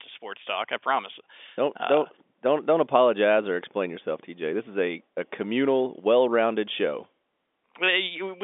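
No technical fault can be heard anywhere in the speech. The G.711 telephone coding is working as it should, holding the sound to a line band of roughly 200 Hz to 3.6 kHz with nothing above 3.8 kHz and at most a faint trace of its coding noise.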